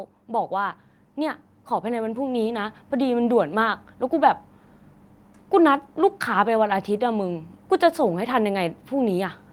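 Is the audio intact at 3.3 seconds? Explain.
No. At 3.3 seconds the speech has just come out of an automatic gain rise that ran from 0.27 to 3.27 s. The gain control judged the input too quiet and lifted it gradually, by about 9 dB. Voice and background swelled together.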